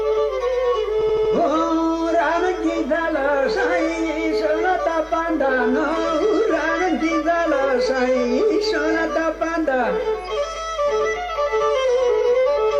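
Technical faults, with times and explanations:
1.01–1.33 s, repeated frames: a short chunk of the sound plays again and again, giving a stutter. The repeats come every 80 ms, which fits one block resent four times, stretching the clip by 320 ms.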